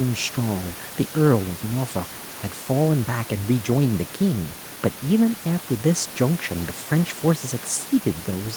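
Nothing in this speech recording goes wrong at any point, and the room noise sitting about 19 dB below the talking is simply part of the space it was captured in.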